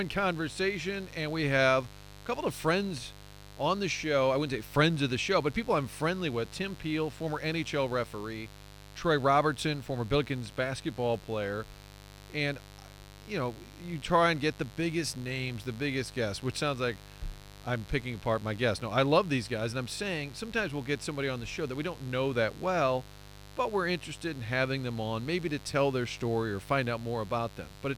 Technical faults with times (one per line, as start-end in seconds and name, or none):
0.00-27.98 mains buzz